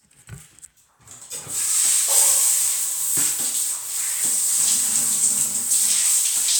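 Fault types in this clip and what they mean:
No technical faults can be heard in this recording.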